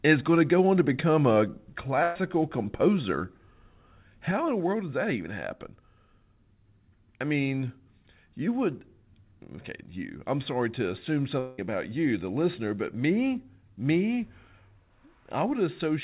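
At 2.03 to 2.16 s, a burst of packet loss: 120 ms of speech is missing, bridged by the last sound held and fading.

From 4.31 s to the end, one channel drops out, likely a lost stereo leg, so the mono level falls abruptly by about 6 dB.

At 11.39 to 11.59 s, a long network dropout, likely: about 190 ms never arrives, filled by a fading continuation before speech resumes further on, narrowband below 4 kHz.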